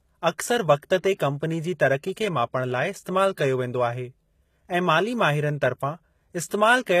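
From start to finish the speech carries plainly audible HE-AAC compression damage, likely from a low-rate HE-AAC v2 encode, and the amount of damage fits something around 20 kbps. Only the lower band is really coded. The treble is patched in by copying lower bands upward, so the top end sounds synthetic, with s sounds going gritty and metallic. Above 14.9 kHz there's nothing at all.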